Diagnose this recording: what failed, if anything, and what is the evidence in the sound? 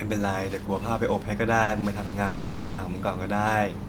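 Network stage, at the receiver's jitter buffer. There are three short stalls from late packets, at 1.63, 1.80 and 2.06 s, where the speech gets held for about 50, 20 and 60 ms and then resumes exactly where it left off. Nothing is lost; it just drags.

Then there's a longer call audio freeze from 2.26 to 2.80 s. The last sound is stretched into a fading buzz for about 520 ms, never quite reaching silence, before the speech picks up intact. This was likely packets held up in transit that drained the jitter buffer.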